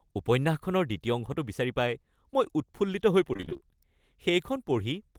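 From 3.33 to 3.61 s the speech goes choppy and robotic: repeated packet loss, holes up to 27 ms filled by extending the preceding sound.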